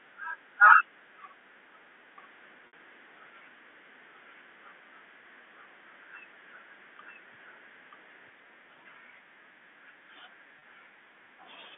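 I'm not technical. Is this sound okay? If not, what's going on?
No, there are two brief glitches from packet loss with pitch repetition. At 2.67 s, about 60 ms of sound went missing. The phone filled the gap by repeating the last bit of voice, which you hear as a short, fading buzz. At 10.59 s a shorter 30 ms gap sounds like a tiny held hum. The narrow, telephone-like tone is just normal phone-line coding.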